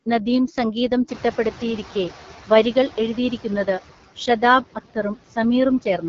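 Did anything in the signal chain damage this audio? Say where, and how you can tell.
Yes. Call processing ran noise suppressor artifacts over the whole clip. A frame-by-frame suppressor pulled down the bands it judged to be steady noise by about 9 dB. You can hear it throughout: the background dips in the gaps between phrases and swells back under the speech.

At the codec stage, the audio went through the AMR wideband (HD Voice) codec. Nothing is present above about 7.2 kHz, and the band just below that edge sounds like shaped noise rather than real detail, which is how AMR-WB fills its top range. The roughness and rasp on the speech are plainly audible. That fits one of the two lowest AMR-WB rates, around 8.85 kbit/s, where the pulse-driven model has too few bits to follow the voice cleanly.

The noise suppressor catching up shows from 1.08 to 2.12 s, also in call processing. Room noise jumps by about 17 dB at around one second, leaving the speech about 17 dB above it. 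The suppressor's noise estimate lagged that change. For roughly 1.04 s the louder background comes through with less reduction, then sinks as the estimate adapts. It settles at about 6 dB of cut during that stretch, which is audible as the background fading down on its own.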